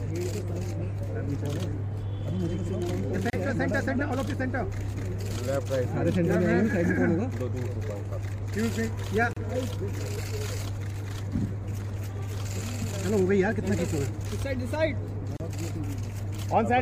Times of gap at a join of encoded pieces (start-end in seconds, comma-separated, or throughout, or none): 3.30-3.33, 9.33-9.37, 15.37-15.40